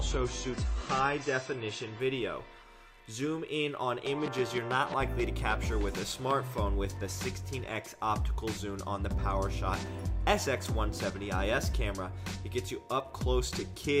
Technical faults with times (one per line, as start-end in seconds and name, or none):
0.00-2.00 adaptive stream starting at a low bitrate